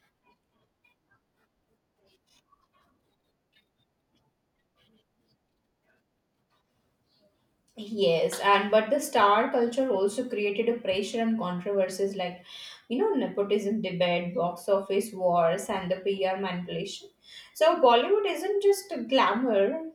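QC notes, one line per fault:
Nothing stood out on listening to the speech.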